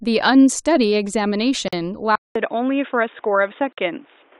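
At 1.68 s a 46 ms silence cuts abruptly into continuous speech, then resumes where it stopped. This is a gap at a join of encoded pieces, where separately encoded segments were butted together with their encoder delay and padding left in. From 2.16 s, after a 200 ms silence, the speech turns dull and boxy, with nothing above 3.7 kHz and a faint new background noise well below the voice at a similar level. This is likely an input switched to a poorer device. At 3.73 s a second 48 ms gap appears, 2 s after the first, matching the same join spacing.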